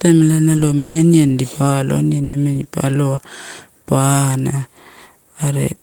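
From 0.77 to 0.97 s, the sound before "aniani dipa alo" stretches into a fading buzz or hiss for about 180 ms. It never falls to silence. Speech then resumes with that stretch gone. The likely cause is a long network dropout, where the receiver filled the gap by continuing the last sound.

A burst of packet loss follows at 2.23 to 2.35 s, just after "aniani dipa alo". About 100 ms of audio never arrived. The receiver held the last sound and turned it down, giving a brief fading tail. Speech picks up further on.

At 3.15 to 3.19 s there is a short concealed packet loss. About 20 ms missed the decoder. The receiver extended the preceding sound and blended back into real audio. It comes across as a quick smear.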